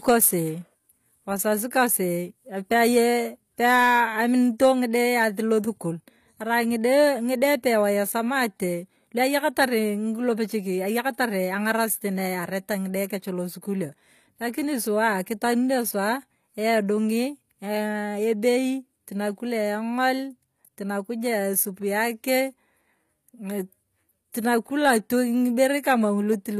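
Throughout, s sounds turn gritty and lispy, with nothing above 14.9 kHz. The treble sounds rebuilt rather than simply dulled as by a low-pass, likely HE-AAC compression at a bitrate near 24 kbps. At 24.32 s a pre-echo appears: a hiss of about 19 ms smears in just before an attack as block-spread quantisation noise leaks ahead of it, rather than a click landing on the attack itself.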